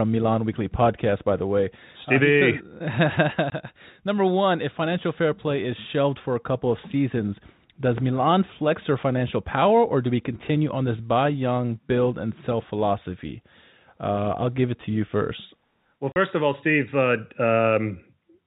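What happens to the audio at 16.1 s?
At 16.12 s the speech drops out for 40 ms, ending at 16.16 s just before "of all". This is packet loss filled with silence. The receiver played nothing for the missing stretch, which fits two 20 ms packets. The hole has hard edges.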